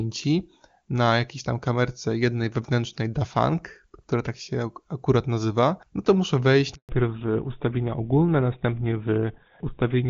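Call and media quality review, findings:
Handover gap, 6.75 to 6.89 s, right after "no to muszę wejść": audio drops out for 140 ms. During the network switch no frames arrived. Sound decays within tens of milliseconds, and anything said in the gap is lost.

Fallback to narrowband, 6.89 s to end: nothing above 4 kHz, sound duller and rougher. The call moved off HD Voice. Before the switch, AMR-WB sounds clean, which fits its top rate. After it, the sound fits GSM full rate at 13 kbit/s.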